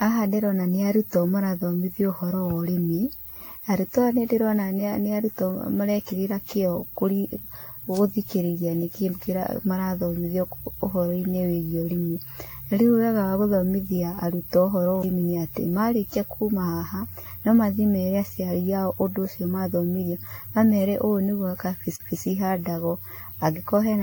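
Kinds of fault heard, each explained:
Generation loss: The speech sounds swirly, smeared and hollow, with blurred attacks and nothing above 18.6 kHz. That's more damage than a single 96 kbit/s AAC-LC pass would leave, so it was likely re-encoded around fifteen times, each pass stacking fresh quantisation noise and spectral holes.
Electrical switching spike: At 7.97 s there's a sharp snap sitting on top of the speech rather than interrupting it. That's likely a nearby switch, motor or static discharge arcing briefly and getting picked up on the audio line.
CD skip: At 15.02 s and again from 21.96 to 22.00 s, there's a tick with a brief mute, about 10 ms and about 40 ms, and then playback carries on from a different spot. The laser jumped tracks on the disc's spiral and resumed elsewhere.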